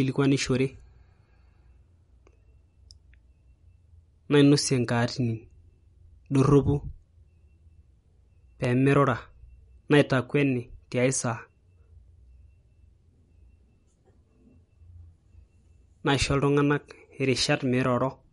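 Speech clip. MP3 compression is audible throughout: nothing above 11.1 kHz, with watery, swirling detail that fits a low bitrate around 48 kbps, likely from the encoder starving weak frequency lines. Periodic USB or driver dropouts from 7.62 to 11.70 s skip about a millisecond of audio every 1.02 s, producing around five evenly spaced ticks.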